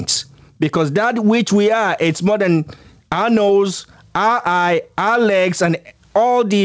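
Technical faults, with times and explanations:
Throughout: gain pumping. The level ducks by around 15 dB under each loud syllable, so the speech sounds squashed. The likely cause is input gain set far too high, with a fast limiter clamping down on each peak.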